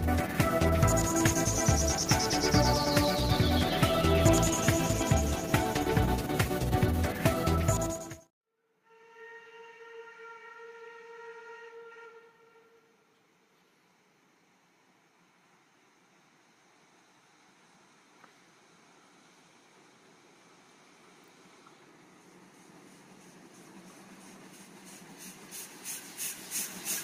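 Nothing in this one stands out as a fault, so there's nothing to flag here.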